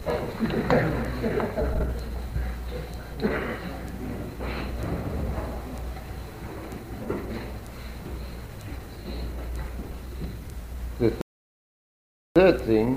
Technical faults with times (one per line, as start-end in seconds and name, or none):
11.21-12.36 rebuffering stall